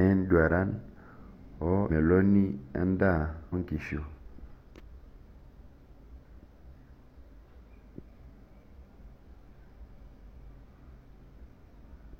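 Compressed frames are skipped four times in the speech, at 1.86–1.91 s, 3.49–3.54 s, 4.14–4.19 s and 5.16–5.20 s. Whole frames never reach the output, so the audio jumps forward by roughly 0.3 s, 1 s, 0.2 s and 0.4 s, which points to runs of about seven, twenty, five and seven frames of 46.4 ms.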